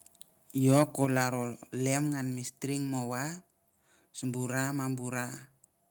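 Speech with a harsh, crackling edge on the loudest syllables from 0.67 to 1.23 s, just before "lem ngan me string". This is microphone overload: peaks likely driven about 4 dB past the converter's limit, flattening a small fraction of samples.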